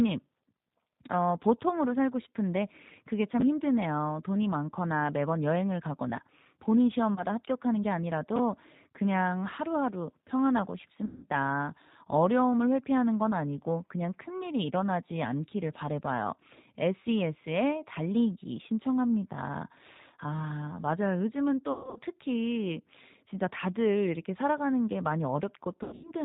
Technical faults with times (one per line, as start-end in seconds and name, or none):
0.00-26.24 G.729 codec
7.14-7.23 VoIP packet loss concealed by the speech codec
11.05-11.27 VoIP packet loss concealed by the speech codec
21.72-22.00 VoIP packet loss concealed by the speech codec
25.83-26.12 VoIP packet loss concealed by the speech codec